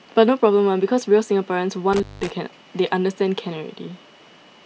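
An intermittent contact, a loose cable or plug briefly losing connection, breaks the signal path between 1.93 and 2.30 s. The speech drops out for about 190 ms within that span, with crackle where the contact opens and closes and faint hiss filling the gap.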